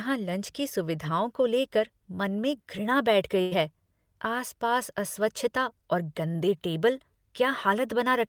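At 3.41 to 3.53 s a burst of packet loss interrupts the speech: about 100 ms of audio never arrived in time, so the receiver stretched the last sound for roughly 98 ms, fading it down, before playback resumes further on with that stretch missing.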